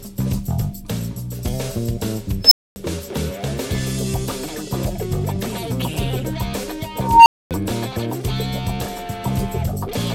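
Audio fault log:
2.43–2.76 s, unstable filter: a tone near 5 kHz swells to clipping within 79 ms as the feedback loop's output runs away, then overflow leaves 248 ms of silence.
6.98–7.51 s, unstable filter: a tone around 1 kHz builds over 283 ms until the runaway output clips and overflows, then 248 ms of silence before the filter resets.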